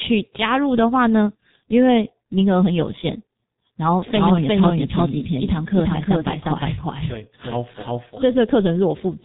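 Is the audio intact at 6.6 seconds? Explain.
No. At 6.6 seconds the speech falls inside a doubled audio track running from 4.14 s to 8.32 s. A second full-band copy of the same speech trails the original by roughly four tenths of a second, at about the same loudness, most likely because an edit or a slower capture path left two copies out of step. Unlike a room echo, the copy has no decay or reverberant colour. It is a clean repeat, and it starts and stops abruptly at those boundaries.

The same moment also carries the damage of a G.723.1 codec, which affects the whole clip. Nothing passes above 3.8 kHz, and the long 30 ms frames with a slowly updated voice model leave the speech muffled and hoarse, with smeared consonants. The heavy degradation points to a very low rate of around 6 kbit/s. A plain low-pass filter would remove the top without adding this rough, hoarse texture.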